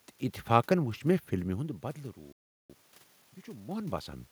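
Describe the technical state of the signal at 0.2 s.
At 0.2 s the signal is intact, with only the room's own background noise audible under the speech.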